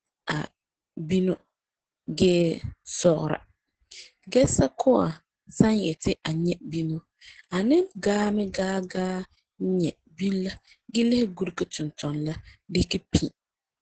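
Speech, carried throughout with heavy Opus voice compression in SILK mode: nothing remains above 8.7 kHz, and the coarse excitation coding leaves it muffled, hoarse and slightly robotic. The damage fits wideband Opus at around 10 kbps with 20 ms frames.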